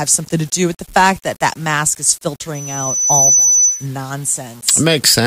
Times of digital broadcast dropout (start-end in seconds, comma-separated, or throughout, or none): none